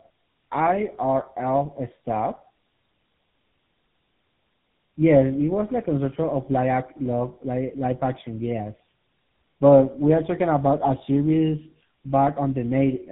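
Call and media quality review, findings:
Tandem speech coding, throughout: rough, muffled, warbly speech, consistent with AMR-NB decoded to G.711 then re-encoded as GSM full rate. Second coder compounds first's errors. Spectrogram: hard ceiling near 3.8 kHz, smeared, blotchy formants, flickering harmonics.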